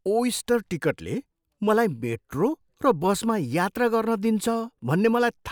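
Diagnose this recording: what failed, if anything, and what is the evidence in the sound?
Listening to the speech, nothing stood out that would point to a failure at any stage of the chain.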